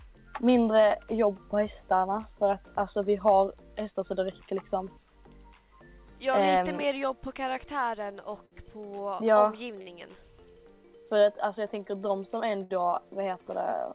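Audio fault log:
8.12–8.16 s, 8.46–8.54 s, 9.82–9.89 s and 12.63–12.72 s, short stall from a late packet: each time a packet arrived late and the jitter buffer ran dry. The receiver held the last sound for about 15, 60, 53 and 65 ms until the packet came, then resumed from the same point. Nothing is lost, but the sound briefly freezes and drags, with a faint buzz or dip, and the playout falls progressively further behind.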